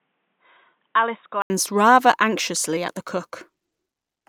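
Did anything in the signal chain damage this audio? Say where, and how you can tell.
Yes. At the input device stage, 0 to 1.5 s is cut above 3.8 kHz and about 10 dB quieter, and an 80 ms gap precedes "rather anxiously at the". Likely an input switched to a poorer device.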